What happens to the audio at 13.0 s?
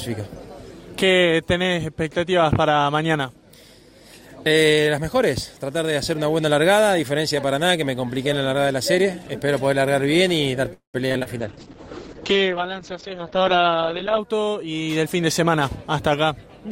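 At 13.0 s the sound is inside a call bitrate drop lasting from 11.40 to 14.25 s. The encoder is starved of bits, so it codes coarsely and cuts the top above 8 kHz. The audio turns rough and muffled, which fits roughly 8 kbps.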